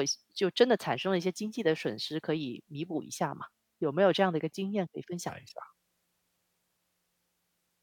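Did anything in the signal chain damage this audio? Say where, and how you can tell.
Yes. From 5.29 s to the end at 7.83 s, the section at the wrong speed plays at 0.793 times its recorded rate, so the speech drops about four semitones and drags. The abrupt change at 5.29 s most likely comes from the playback or editing stage clocking that segment at the wrong sample rate. On a spectrogram the harmonic stack and formants shift downward and syllables stretch. The waveform shows slower, longer periods.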